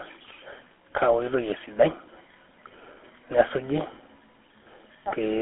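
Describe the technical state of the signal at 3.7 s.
At 3.7 s the speech is passing through a GSM full-rate codec, as it does for the whole clip. The codec rebuilds the voice from a vocal-tract model excited by evenly spaced pulses, keeping only a thinned-out excitation, so the damage is plainly audible as a buzzy, gravelly roughness, consistent with the 13 kbps GSM full-rate coder. The band is confined to roughly 200 Hz to 3.5 kHz, with nothing above 3.9 kHz.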